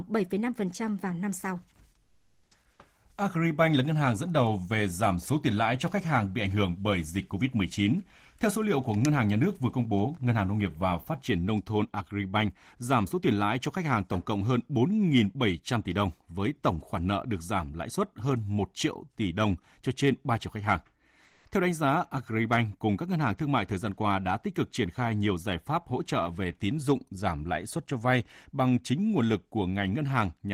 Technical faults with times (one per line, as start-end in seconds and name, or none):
2.03-2.51 comfort noise in place of the background
21.25-21.45 comfort noise in place of the background